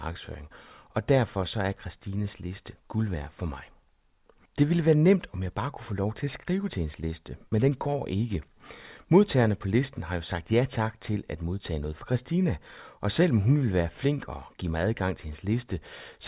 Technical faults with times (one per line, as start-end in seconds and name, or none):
none